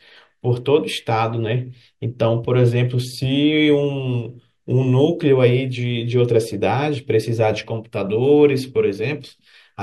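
No technical faults turn up anywhere in this speech recording, so there's nothing to flag here.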